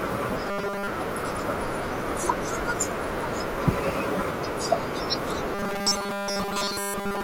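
From 0.47 to 0.87 s, and again from 5.55 s to the end, the speech turns into a rigid 200 Hz metallic buzz: robotic sound from repeated short buffers, likely a 5 ms chunk replayed while most of the real audio is skipped.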